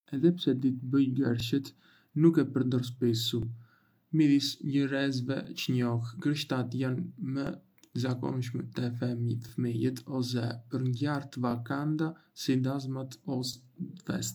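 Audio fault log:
1.40–1.43 s, 3.43–3.45 s, 5.45–5.47 s, 7.47–7.49 s, 13.53–13.55 s: overlapping chunks. A brief click-like stutter recurs at two-second spacing. Each new 2.0 s chunk begins about 21 ms before the previous one ended, so that short slice of speech plays twice at the join.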